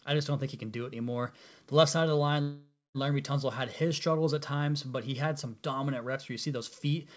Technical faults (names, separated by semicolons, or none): call audio freeze